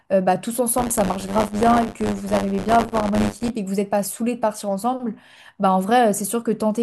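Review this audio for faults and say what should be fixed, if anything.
A robotic 100 Hz buzz sits on the speech from 0.77 to 3.51 s. This is buffer tearing. The ring buffer's writer and the hardware reader have slipped and cross every period, so roughly a tenth of each buffer replays audio about 30 ms old, hard-joined on both sides.

To prevent it, keep the write position locked a safe margin ahead of the read position and resynchronise whenever it drifts into the period being played.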